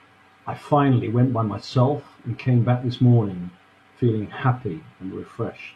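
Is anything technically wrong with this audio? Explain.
No technical faults are audible.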